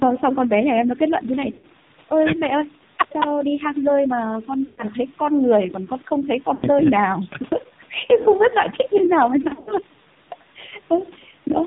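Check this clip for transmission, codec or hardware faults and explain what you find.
Two faults are present: heavy narrowband mobile coding throughout, and four bursts of lost frames.

AMR narrowband mobile codec, throughout: nothing above 4 kHz survives, and the sparse pulse model leaves the speech buzzy and synthetic, which fits a low mode around 6 kbps.

Lost AMR speech frames, at 1.52–1.66 s, 4.66–4.83 s, 6.54–6.66 s and 9.42–9.72 s: failed frames were rebuilt from the last good settings at falling gain, so sound smears, dips and briefly warbles. The last stretch comes as scattered short dropouts rather than one gap.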